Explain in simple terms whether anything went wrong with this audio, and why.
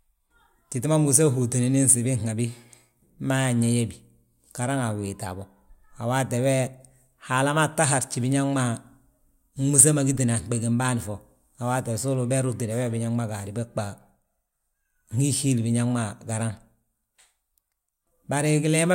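The clock that times each sample in the converter was unsteady for the whole clip, so every measurement of the sound was taken a tiny bit early or late, by less than a millionth of a second. That is sample clock jitter. The timing slips matter most where the speech changes fastest, so a faint hiss or grittiness rides along with louder and brighter sounds, like sharp consonants, and disappears in the pauses.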